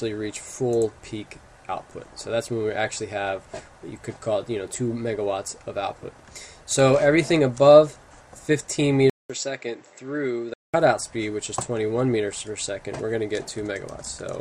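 At 9.10 s there's a 200 ms gap, then until 10.74 s the sound goes dull and a bit quieter, with nothing above 7.8 kHz and a faint new noise floor underneath. That's likely the input switched to a poorer device mid-recording.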